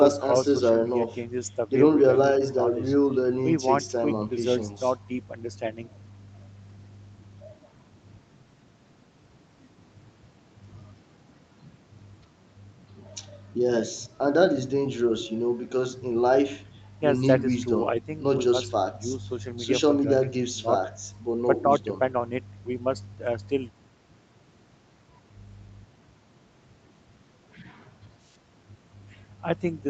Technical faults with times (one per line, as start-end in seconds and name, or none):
none